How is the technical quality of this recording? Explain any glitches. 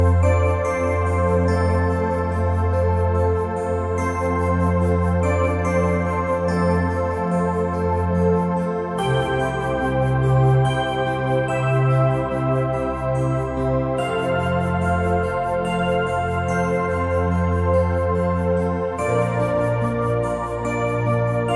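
Nothing stood out as a technical problem on listening, so there are no glitches to explain.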